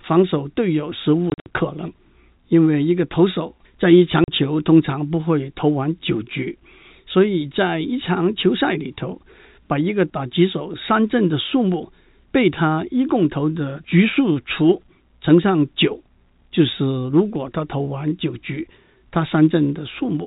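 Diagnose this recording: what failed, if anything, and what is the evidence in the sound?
Network packet loss filled with silence: packets were dropped and the receiver played silence instead. From 1.3 to 1.46 s, 120 ms of speech vanishes in hard-edged gaps up to 60 ms long. A 40 ms hole follows at 4.24 s, fitting 20 ms packets.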